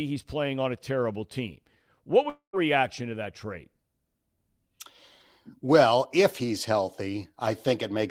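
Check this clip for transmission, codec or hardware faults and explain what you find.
One fault stands out in this speech clip. From 2.29 to 2.56 s, the sound smears into a fading buzz, falls silent briefly, then resumes with 0.24 s lost, likely a long network dropout the receiver tried to conceal.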